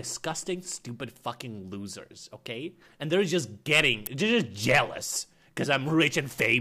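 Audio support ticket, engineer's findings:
Sharp snap at 4.06 s, electrical switching spike reaching around -10 dBFS. Likely a nearby switch or static discharge arcing, picked up on the audio line.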